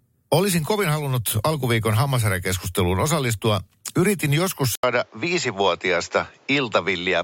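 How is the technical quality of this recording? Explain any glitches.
Quality drops partway through the recording. At 4.75 s the sound breaks for about 80 ms, then continues to the end with nothing above 7.6 kHz, a duller, boxier tone, and a new background noise floor around 35 dB below the speech, with no obvious change in overall level. This is likely an input switched to a poorer device: the recording moved to another microphone or headset path with a narrower band, its own coloration, and its own noise.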